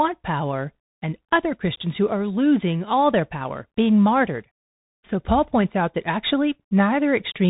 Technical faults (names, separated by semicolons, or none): Bluetooth CVSD headset codec